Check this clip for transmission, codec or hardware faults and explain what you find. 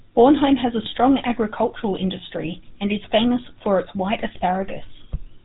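Two faults are present: a codec coloration across the whole clip and a short burst of corrupted decoding early on.

The GSM full-rate codec shapes the speech for the full clip. The encoder reduces each frame to a vocal-tract filter driven by a sparse, regularly spaced pulse train, and the decoder rebuilds the excitation from only a fraction of the original samples. Nothing above 4 kHz survives. The damage is plainly audible as a buzzy, gravelly roughness laid over the voice, which fits a 13 kbps full-rate stream. A plain telephone band-limit would dull the sound in a similar way but leave it clean. Here the grit comes from the coarse excitation.

GSM bit errors occur from 0.83 to 0.89 s. Corrupted bits reach the decoder, so wrong filter, pitch and gain values are applied. The spectrum twists and the level jumps, producing a brief squawking, gargled pop. The length fits about three frames and an error rate of roughly 2 percent. 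Packet loss sounds different: it leaves gaps or repeated fragments. These errors instead produce loud, distorted garbage in place of the speech.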